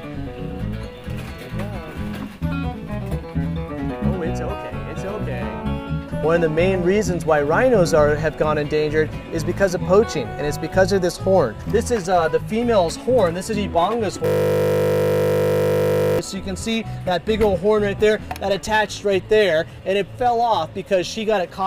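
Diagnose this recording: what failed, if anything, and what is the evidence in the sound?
The driver or buffer stage failed here: a system hang loop from 14.26 to 16.19 s. For nearly two seconds the sound collapses into a steady 50 Hz buzz, because a single 20 ms slice is being replayed back to back, close to a hundred times. That's the classic picture of the host or driver freezing while the audio hardware keeps cycling through the same ring buffer. The 20 ms repeat points to a buffer of about that length.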